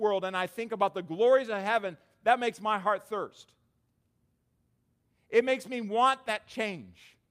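No technical faults turn up anywhere in this speech recording, so there's nothing to flag from beginning to end.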